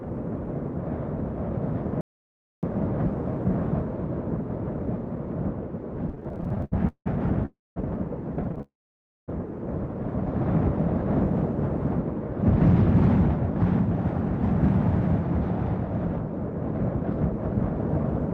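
At 2.01 s the sound drops out to dead silence until 2.63 s, with no room tone at all. That's an audio dropout to silence, likely a lost input with zeros written in its place, and about 0.62 s of material is simply gone.

From 6.09 to 7.08 s there's a run of repeated stalls, or stutter. The jitter buffer kept running dry, 18 times in all, with the longest wait at 180 ms. Each gap gets padded by stretching the last sound, so it drags and stutters rather than losing anything.

At 7.46 s a call audio freeze hits. The last sound smears into a fading buzz and then mostly silence until 7.78 s, likely from packets held up in transit. The audio then resumes where it left off, a bit later than it should.

A shorter stutter runs from 8.44 to 8.62 s, with five tiny gaps of no more than 13 ms each.

It leads straight into a longer freeze that holds until 9.30 s. Here the concealed stretch is about 0.66 s, most of it near-silent, before playback picks up again with nothing missing.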